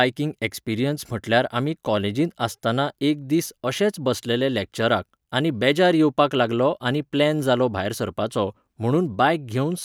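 No technical faults can be heard anywhere in this speech recording. There is nothing to place on the timeline and nothing to trace to a cause.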